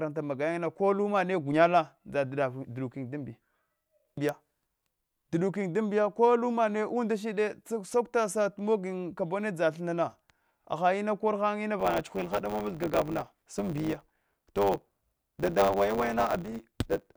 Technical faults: block size mismatch (truncated)

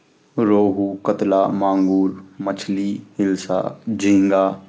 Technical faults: none

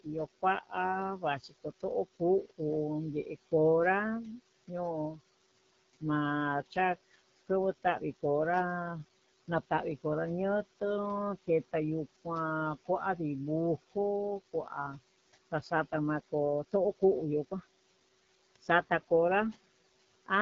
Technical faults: noise suppressor artifacts; AMR wideband (HD Voice) codec

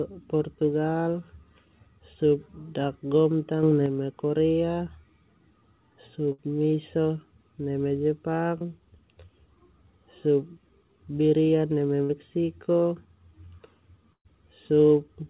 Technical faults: sudden gain jump; burst of packet loss; short concealed packet loss

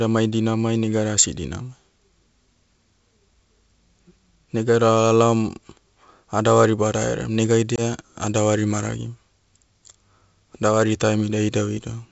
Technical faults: packet loss on an ADPCM call

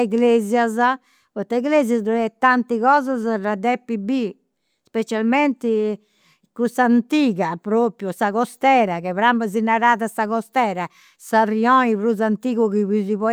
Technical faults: none

